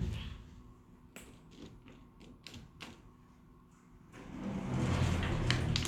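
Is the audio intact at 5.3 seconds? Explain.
Yes, the sound at 5.3 seconds is intact, with no dropout, click, distortion or other fault at that moment.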